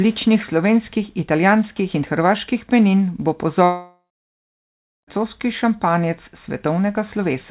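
From 3.64 to 5.09 s the sound smears into a fading buzz, then about a second of silence, likely a long network dropout. Unlike a brief packet-loss glitch, about 1.4 s is lost outright.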